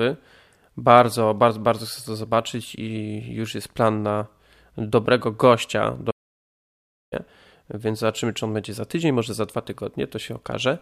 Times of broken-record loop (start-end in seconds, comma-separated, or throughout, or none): none